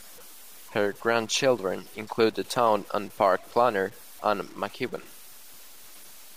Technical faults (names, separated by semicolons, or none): low bit depth without dither